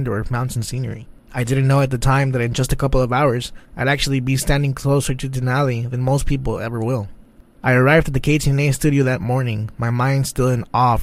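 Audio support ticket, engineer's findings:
Bluetooth SBC bit pool drop, 0.34–2.53 s: dulled treble, gritty noise. Spectrogram shows upper bands thinned; fits bit pool falling from 31 to 16, near 110 kbps.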